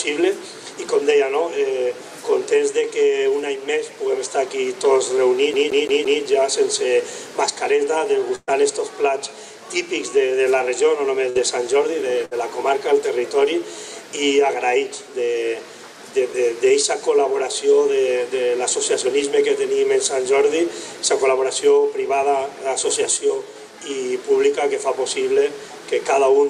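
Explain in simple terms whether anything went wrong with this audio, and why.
From 5.53 to 6.22 s the sound stutters like a CD stuck on one turn: the same 0.17 s slice plays four times, with a brief mute at each jump, much as a scratch keeps throwing a laser back to the same spot.

Three bursts of packet loss follow, at 8.35, 11.29 and 12.25 s. In each, a piece of audio never arrived, so the last sound was stretched and faded out to cover the hole: about 120 ms at the first, with a 10 ms silence, and about 60 ms at the others. Playback then resumes with that stretch missing.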